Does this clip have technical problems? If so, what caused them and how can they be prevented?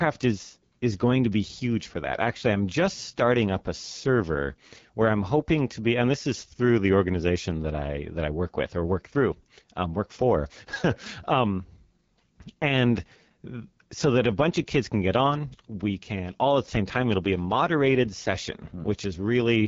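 Yes. Throughout, the speech has the rough, raspy edge of the AMR wideband (HD Voice) codec at a low rate, one that sounds like the 8.85 kbit/s mode. There's nothing above about 7.4 kHz, and the top band is just shaped noise standing in for real detail. Running the call at 12.65 kbit/s or higher would avoid it.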